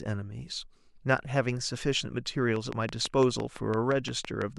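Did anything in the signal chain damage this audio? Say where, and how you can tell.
Yes. From 2.56 s to 4.43 s a steady ticking runs over the speech, about ten clicks at a regular 5.9 per second, each much the same shape and peaking about 15 dB above the speech, so they stand out sharply. This is a train of clicks. The even spacing and similar shapes point to a repeating impulse entering the chain, likely interference from nearby equipment coupling into the analogue wiring or a faulty connection or power supply.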